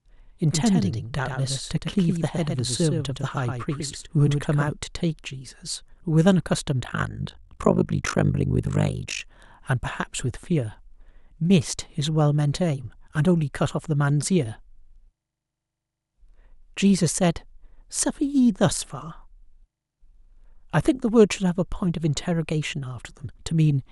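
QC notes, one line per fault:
0.00–4.68 s, doubled audio track: it's already running when the clip starts, with a second full-band copy trailing roughly a tenth of a second behind and a few dB quieter, dry and with no room tail. Likely a slower capture path or a misaligned edit.
6.84–9.22 s, overlap-add ripple: the level pumps about 60 dB deep, around 50 times a second, giving a harsh robotic flutter. The frames were rejoined with an overlap that doesn't add up to steady gain, so each frame dips and swells.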